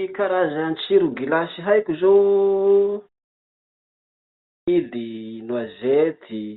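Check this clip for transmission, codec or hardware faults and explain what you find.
One fault is present: a clipped start after a pause. At 4.25 s, following a 1.25 s silence, the sleeping output device wakes late. The first 0.43 s is swallowed, so speech bursts in abruptly. The telephone-band G.711 sound and the muted pauses are heard around it.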